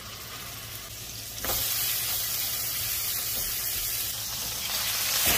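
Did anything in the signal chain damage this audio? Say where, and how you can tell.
No, nothing in the signal chain stood out as damaging this audio on listening.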